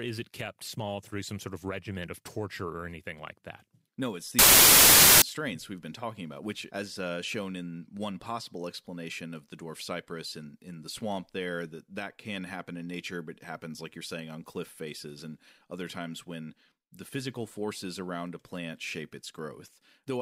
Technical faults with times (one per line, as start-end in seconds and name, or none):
4.39-5.22 samples built from the wrong bytes